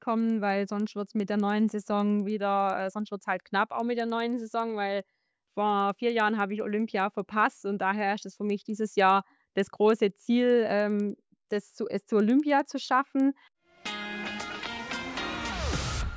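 Regular ticking at 10 per second runs through the whole clip wherever there's signal, the classic sign of a resampler restarted on every block. Each chunk, which fits 100 ms blocks in a 48 kHz to 16 kHz conversion, gets converted without its neighbours, leaving a small error at every seam.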